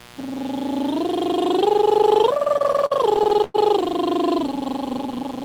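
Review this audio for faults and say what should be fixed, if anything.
A steady, raspy buzz sits under the music from start to finish, roughly 20 dB below it. This is mains buzz: sharp switching spikes at twice the 60 Hz mains rate leak in through a dimmer, rectifier or unshielded connection, spraying harmonics up into the kilohertz range. To prevent it, keep the signal path away from dimmers and switching supplies, and use shielded, properly grounded cabling.

Between 2.37 and 3.56 s the music drags and stutters through a run of thirteen short holds, the longest about 100 ms. These are repeated stalls (stutter): packets arrived late, the jitter buffer kept running dry, and the receiver stretched the last sound to cover each wait. About 250 ms is filled this way, roughly a fifth of that stretch, with nothing actually lost. To prevent it, give the jitter buffer more headroom or stabilise the network path so packets arrive steadily.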